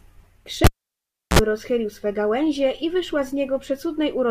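At 0.64 s the speech breaks off with a sharp pop. The cable was pulled and plugged in while live. The pop marks the contact breaking. Near silence follows for about 0.70 s while the line is disconnected. Just before the sound returns, a short burst of 60 Hz mains buzz lasts about 53 ms. That is the plug tip touching the socket before it seats fully. A second pop lands at 1.39 s, and the speech comes back.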